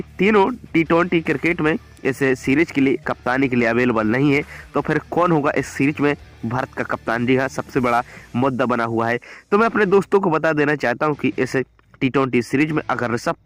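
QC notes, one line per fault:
No faults detected.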